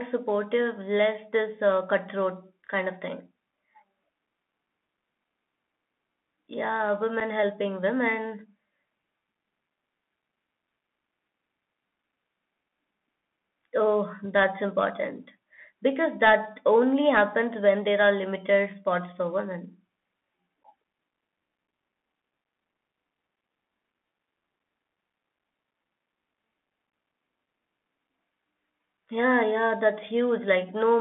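The whole clip runs through a Bluetooth CVSD headset codec, the old narrowband headset path, which fits a 64 kbps CVSD link. Everything sits between about 200 Hz and 3.5 kHz, so the speech sounds boxy and phone-like. The one-bit delta coding also leaves a grainy hiss underneath, scratchy s sounds, and gritty distortion on loud bright moments.

On top of that there's unconcealed Bluetooth headset packet loss. At 7.2 s, right before "helping women", about 7.5 ms vanishes, a couple of packets' worth. At 20.64 s about 11.2 ms drops out. Then from 26.90 to 26.93 s roughly 26 ms goes missing across several packets, in scattered bits with the longest gap around 15 ms. Nothing fills those holes, so each one is an abrupt little gap or click, and the last cluster comes across as a brief crackly, chopped patch.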